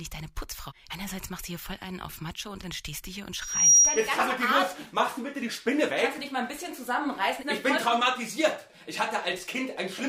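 At about 3.41 s a loudspeaker feedback squeal kicks in: a single piercing tone near 5.7 kHz swells up over roughly a third of a second and then sits well on top of the sound, around 15 dB louder than it, until it drops out at about 4.14 s. What's happened is the mic caught its own loudspeaker, and at that one frequency the loop gain went past unity, so the tone kept feeding itself.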